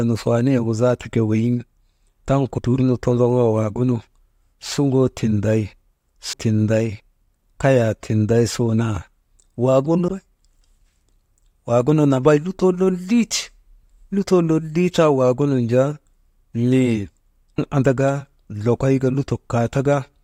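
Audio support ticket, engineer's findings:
Audio missing between chunks: abrupt skips at 2.58, 6.33, 10.08 and 17.58 s, with no silence at the splice and roughly 0.3 s of sound gone at each. The first lands just before "dur nu". Spacing fits 4.0 s processing chunks. Likely a recorder or processing buffer dropping audio while closing one chunk and opening the next, then butting the two sides together.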